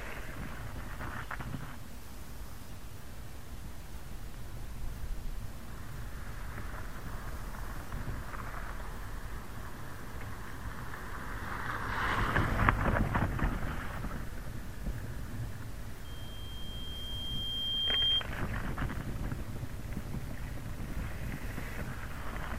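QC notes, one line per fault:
16.04–18.26 s, loudspeaker feedback squeal: a single 3.2 kHz tone swells over about two seconds to roughly 10 dB above the sound as the microphone re-amplifies its own loudspeaker output. Unlike a steady interfering whistle, it grows from nothing rather than starting at full level.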